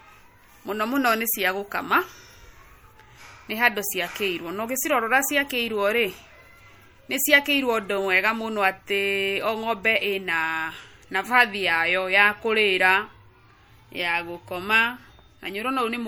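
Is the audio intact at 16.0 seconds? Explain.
No. The speech carries plainly audible MP3 compression throughout, including 16.0 s. Weak frequency lines drop in and out between frames, giving a watery swirl, likely from a 64 kbps encode.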